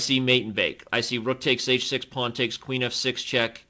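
The audio reaches the listener through a call path and shows no technical faults, with its content stopping at 8 kHz, which fits a wideband call codec such as G.722 at 64 kbps.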